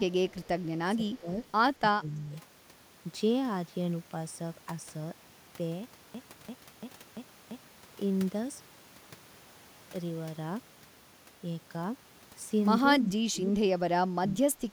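From 0.3 to 0.48 s a faint delayed copy of the speech trails the original by 225 ms, sitting roughly 35 dB below it. This is an echo leak, likely from a far-end loudspeaker whose echo canceller let part of the microphone pickup through and sent it back. On a spectrogram it shows as a weak, shifted ghost of the speech harmonics. In the waveform it barely rises above the floor.

Speech suppressed in double talk also appears, starting inside the echo leak. It likely comes from the canceller mistaking the talker for loudspeaker echo while both ends were active and turning everything down. It occurs at 0.31–0.37 s (a shallow dip of a few dB), 0.96–1.3 s (about 15 dB), 1.8–2.34 s (about 25 dB), 13.0–13.59 s (about 20 dB) and 13.99–14.73 s (about 25 dB). The speech audibly sags or drops out. The waveform envelope caves in, and the spectrogram shows dimmed or missing bands.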